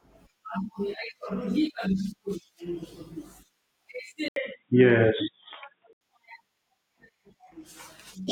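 At 4.28 s the speech drops out for 80 ms, then turns dull and boxy until 6.01 s, with nothing above 3.8 kHz, a faint new background noise and much the same level. The likely cause is an input switched to a poorer device.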